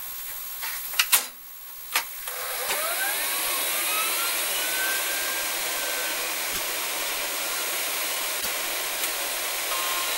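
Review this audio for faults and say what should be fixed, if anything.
At 2.68 to 2.75 s, 6.52 to 6.59 s and 8.40 to 8.47 s the audio skips ahead and then garbles for about 70 ms, under three 26.1 ms frames. This is likely a broken MP3 bit reservoir: after dropped frames, the next frames borrow bytes that belong to a different frame. The waveform shows a discontinuity. Fix it by keeping MP3 streams intact or cutting only at frame boundaries with the reservoir preserved.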